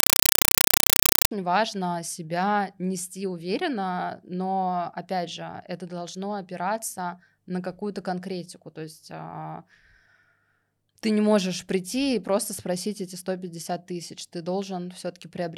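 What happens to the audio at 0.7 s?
At 0.7 s the speech is replaced by a compressed stream played as audio, from 0.00 to 1.31 s. Undecoded AC-3 data arrives as samples: 5.33 ms noise bursts with silent padding, repeating at 31.25 Hz, heard as loud chattering static.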